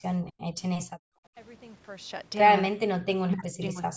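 Right at the start, from 0.21 to 0.33 s, the speech dips by roughly 10 dB for about a tenth of a second. It's a shallow, brief sag, likely speech suppressed in double talk: the echo canceller heard both ends at once, couldn't split the local talker from the loudspeaker echo, and pulled everything down.

From 0.87 to 1.35 s the room tone drops out hard, by about 39 dB, for roughly half a second. That's background gated by the echo canceller. While the far end played through the loudspeaker, it clamped the microphone, so the ambience just vanishes and then comes back when it lets go.

The speech suppression hits twice more. At 2.7 to 2.75 s there's a quick, deep bite of around 40 dB, likely the same double-talk suppression chopping a fragment out. Then from 3.04 s to the end the speech is pushed down by around 35 dB, broken up over most of that stretch. This is likely the canceller again, holding the near talker down while the other side speaks.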